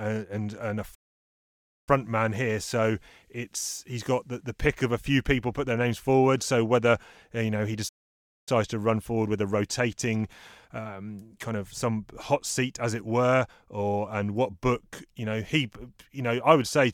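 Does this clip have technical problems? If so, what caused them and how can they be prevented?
Yes. The speech stops dead twice in a playback stall: from 0.94 to 1.89 s, after "and and a" and before "man here", a gap of about 0.93 s; and from 7.88 to 8.49 s, after "uh you know he" and before "to run forward with", about 0.58 s. The likely cause is the player running short of buffered data or its audio thread being blocked. On a waveform each gap is a flat line; a spectrogram shows a blank vertical band. A larger playback buffer and keeping the audio thread free of blocking work would prevent it.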